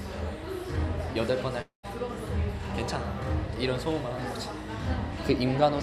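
From 1.61 to 1.85 s there is likely a long network dropout: incoming audio stopped and about 0.22 s of sound was lost. The receiver extends the last sound as a fading buzz, then about 0.12 s of silence, before the audio resumes without the missing part.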